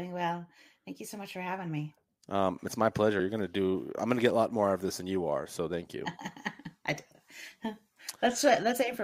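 At 7.14 s the speech shows audio missing between chunks, likely because the recording chain handles sound in 4-second blocks and drops a slice while handing off from one block to the next. Around 50 ms goes missing, and the audio on either side is butted straight together with no gap of silence. The result is a brief skip, a small jump forward in the speech where a fragment has simply vanished.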